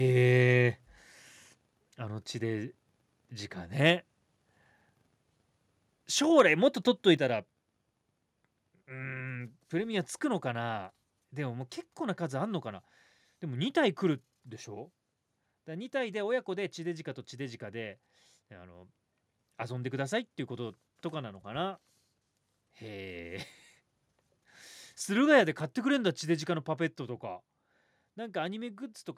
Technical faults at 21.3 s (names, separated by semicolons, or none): none